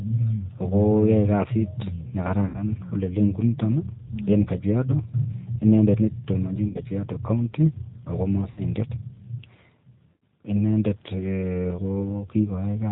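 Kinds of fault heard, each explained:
G.729 codec: The whole clip of speech is narrowband, with nothing audible above 4 kHz, and has the rough, slightly synthetic texture of a low-rate CELP codec. That codec models each 10 ms frame as a vocal tract filter excited by a pitch predictor and a handful of pulses, which fits an 8 kbit/s G.729A link. The damage is plainly audible, with a rough, somewhat artificial quality throughout.
VoIP packet loss concealed by the speech codec: Four short gaps are filled by the decoder guessing forward from its last pitch and filter state at reduced level. They occur at 2.46–2.59 s (80 ms lost), 6.68–6.80 s (70 ms), 8.51–8.62 s (60 ms) and 10.13–10.22 s (90 ms). Each sounds like a smeared, buzzy tone or coloured noise that fades, and the speech right after each one stays weakened briefly while the decoder's state recovers.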